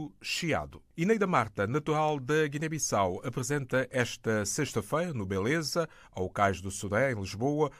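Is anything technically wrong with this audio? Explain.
No, nothing here sounds technically off; it's just a clip of someone talking, with nothing that calls for a closer look.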